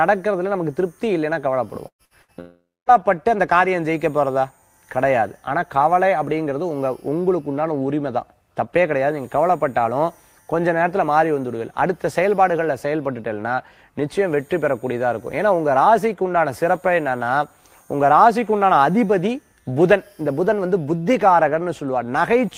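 Just under two seconds into the audio, the sound breaks up three times in quick succession, at 1.87 to 2.02 s, 2.05 to 2.13 s and 2.22 to 2.31 s. Each break is a short buzz or hiss that fades, and the first trails into near-silence before the audio picks up further on. This is a burst of packet loss: roughly 120 ms, 60 ms and 60 ms of audio went missing, and the receiver stretched and faded the last sound to cover each gap. Straight after, from 2.40 to 2.90 s, the sound smears into a longer fading fill that sinks into silence for the last part of that half second before the audio resumes with a chunk gone. That pattern points to a likely long network dropout, with about 480 ms never arriving and the concealment giving out partway through.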